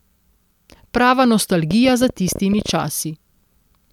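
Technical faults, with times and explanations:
1.71 to 2.70 s, train of clicks: a pulse source, likely electrical interference from nearby equipment or a faulty connection or power supply, injects short spikes into the signal path at about 14.2 per second with uneven spacing. That makes around fifteen clicks of much the same shape, peaking roughly 5 dB above the speech, heard as irregular ticking laid over the talker for about one second.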